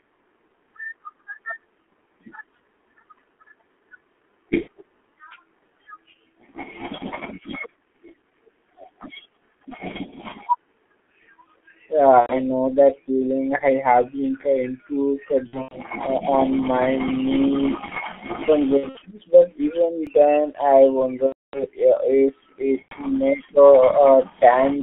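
From start to finish the speech carries the muffled, hoarse character of the G.723.1 codec. Nothing reaches above about 3.4 kHz or below 200 Hz, and consonants smear together. The codec damage is heavy, which fits a rate near 6.3 kbit/s, where a slow-moving voice model rebuilt every 30 ms frame can't keep up with quick articulation. This is a constant dullness rather than a dropout, so it is not the same as the gaps described below.

VoIP packet loss concealed by the speech codec breaks in at 4.61 s (about 60 ms lost), 12.21 s (about 90 ms), 15.47 s (150 ms spread over 240 ms, longest run 90 ms), 18.77 s (150 ms over 240 ms, longest run 60 ms), 21.26 s (270 ms, the longest), and 22.82 s (about 90 ms). Each time the decoder keeps extending its last pitch and filter while turning the level down, so the sound is drawn out into a buzzy tone or coloured noise that fades. The voice then stays thin for a moment after audio returns. 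The gradual fade and that lingering recovery separate it from a hard buffer fault.

At 20.07 s a repeated buffer shows up as a single tiny click or brief buzz. About 1.3 ms of audio plays twice with abrupt joins, which fits a 64-sample buffer. Because the repeat is so brief, it is heard as a click or brief buzz rather than a stutter. It has none of the stretched, fading tone of the concealed packet losses.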